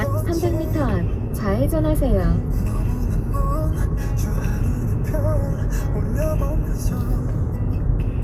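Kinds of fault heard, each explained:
Nothing stood out on listening; no fault of any kind could be heard in this recording.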